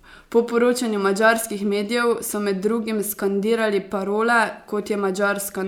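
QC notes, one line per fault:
No faults found.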